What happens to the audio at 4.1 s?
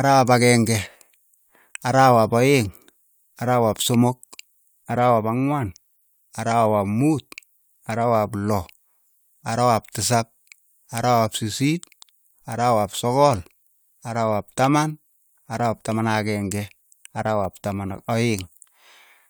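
Nothing goes wrong at 4.1 s; the speech plays through that moment intact, with no dropout, glitch or distortion to be heard.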